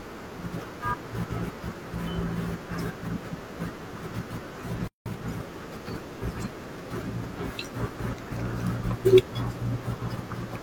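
Speech clip with three playback faults. At 4.88 s the sound cuts to silence for about 180 ms, a playback stall, likely from the player running short of data or its thread being blocked, before resuming at 5.06 s. From 5.06 to 5.22 s a time-compressed catch-up follows: the player trims its backlog by cross-fading out small pieces, so the audio runs at twice normal speed at unchanged pitch. From 7.93 to 8.33 s the frames play out of order: two adjacent blocks of roughly 186 ms each, consistent with runs of four frames, are swapped. This produces a garbled flutter, though no time is lost.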